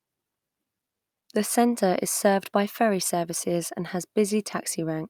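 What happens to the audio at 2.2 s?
Nothing goes wrong at 2.2 s: the speech carries on cleanly through that moment with no dropout, click, distortion or other audible fault.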